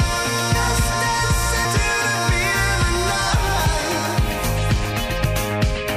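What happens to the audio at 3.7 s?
At 3.65 s, compressed frames are skipped. Roughly 200 ms of audio is lost, which fits about seven missing frames of 26.1 ms each. The decoder jumps ahead, and because neighbouring frames overlap, the join is a brief smeared blip, not a hard click. A spectrogram shows an abrupt spectral discontinuity with a broadband smudge. The waveform shows the envelope shifting suddenly, with no gap of silence.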